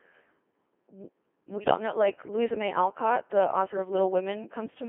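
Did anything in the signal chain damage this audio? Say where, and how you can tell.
Yes, at the codec stage. The whole clip has that robotic, buzzy quality of the Codec 2 vocoder, and the damage is heavy. The speech is band-limited to roughly 300 Hz to 3.4 kHz, and the rate sounds like it fits a 2.4 kbit/s mode. The decoder isn't reproducing the original waveform. It rebuilds the speech from sine waves driven by pitch, voicing, energy and a spectral envelope, so everything comes out synthetic and buzzy.

Then there's a separate hit in transport: bit errors on digital voice radio, from about 1.58 to 1.78 s. Over that stretch the synthetic speech suddenly lurches in pitch, level and tone colour and turns into warbly, bleepy gibberish. That's typical of corrupted bits landing in a low-rate vocoder, where one flipped bit reshapes an entire frame's parameters. The span suggests around seven frames were hit, at an error rate of a few percent.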